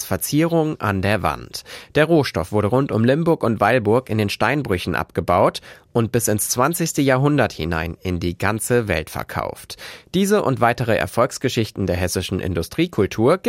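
No technical faults can be heard anywhere in the speech, and the signal holds steady and intact throughout.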